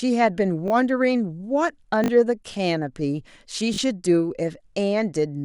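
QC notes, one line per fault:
0.68 s: repeated buffer. One 20 ms slice of speech plays twice with a hard join, a brief buzz as playback ran short of fresh audio.
2.04–2.08 s: repeated buffer. The same 20 ms slice sounds three times. New audio arrived late, so about 40 ms is lost behind a short stutter.
3.74–3.78 s: repeated buffer. Again a 20 ms slice repeats twice more. Hard joins give a quick buzzy stutter, and about 40 ms of speech goes missing.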